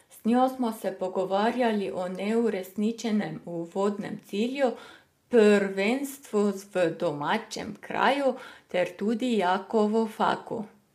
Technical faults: low-delay AAC compression

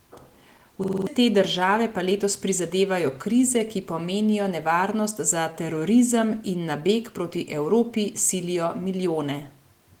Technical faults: system hang loop

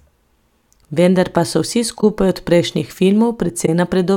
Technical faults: corrupt frame concealed

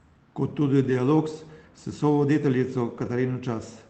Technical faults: lost packet rebuilt from error correction

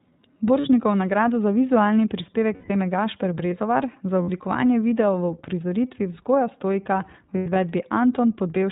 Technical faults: iLBC codec; lost iLBC frames

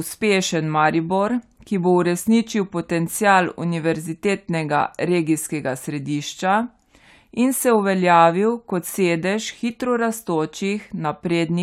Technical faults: none

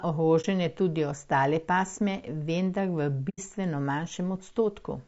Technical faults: low-delay AAC compression; AAC frame loss with muting

